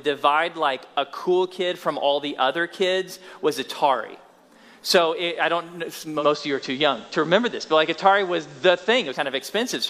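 At 6.15 s a faint hiss rises underneath the sound, well below the signal, with the level shifting by about 2 dB. It stays that way until 9.21 s. This is digital radio blending to analogue: the receiver lost its digital stream and cross-faded over roughly 110 ms to the station's FM broadcast, whose noise floor accounts for the hissier sound, then blended back.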